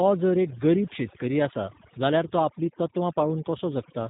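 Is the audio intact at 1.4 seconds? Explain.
No. At 1.4 seconds, as throughout, an overdone noise removal stage cuts frequency bands near its noise estimate, leaving near-silent gaps with twinkling specks. The speech also passes through the G.729 codec, rebuilt from a vocal tract filter and pulses, which fits 8 kbit/s. It sounds rough and synthetic, with nothing above 3.8 kHz.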